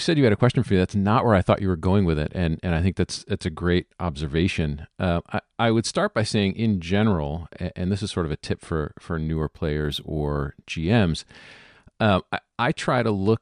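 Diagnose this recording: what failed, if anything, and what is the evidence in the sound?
Imaging from linear upsampling, in sample-rate conversion. From 9.14 to 10.64 s the top of the speech dulls and sibilants take on a faint metallic shimmer. Straight-line interpolation raised 22 kHz to 48 kHz. That weak filter leaves a mirror image from 11 kHz to 22 kHz, about 40 dB down.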